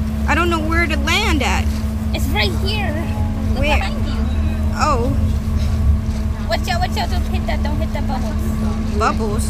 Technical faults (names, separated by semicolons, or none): none